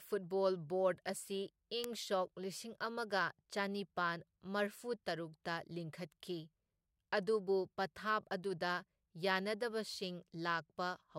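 A speech clip with two bit error spikes, at 1.08 s and 1.84 s. Each is a single sample that jumps away and snaps back. One flipped bit caused it. The first peaks near about -42 dBFS, a sharp tick. The second reaches about -12 dBFS, a sharp click across all frequencies.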